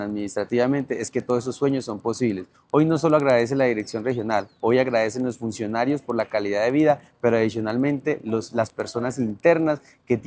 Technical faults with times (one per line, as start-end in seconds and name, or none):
0.00-10.27 resampler restarted on every block